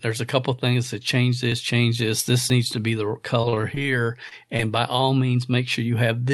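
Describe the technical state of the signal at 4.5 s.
At 4.5 s the speech is inside a stretch of repeated packet loss (robotic sound), from 3.41 s to 4.61 s, between "needs to be the" and "by all". Nine short gaps, the longest 34 ms, are patched by extending the last sound. Speech turns choppy.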